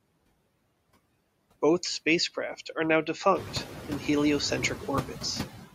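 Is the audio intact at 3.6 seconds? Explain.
No. Noise suppressor artifacts run through the whole clip, including 3.6 s. The suppressor cuts bands it judges to be steady noise, frame by frame, by about 20 dB, so the room noise that has just risen about 12 dB near 3.5 s dips between words and swells back under them.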